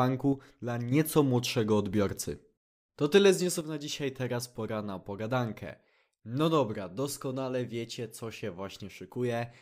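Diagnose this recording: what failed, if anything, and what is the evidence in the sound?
One channel drops out, likely at a loose analogue connection; the level falls abruptly by about 6 dB from 0.33 to 0.92 s and from 3.61 s on.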